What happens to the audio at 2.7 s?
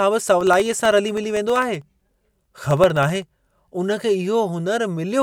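At 2.7 s the speech is inside a run of periodic USB or driver dropouts from 0.41 to 3.29 s. Something stalls the audio path every 64 ms, blanking a fraction of a millisecond to silence each time, which produces a regular train of ticks.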